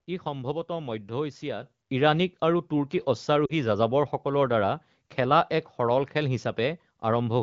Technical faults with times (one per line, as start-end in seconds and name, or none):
1.62 microphone volume stepped up
2.64 microphone volume stepped up
3.46-3.54 lost AMR speech frames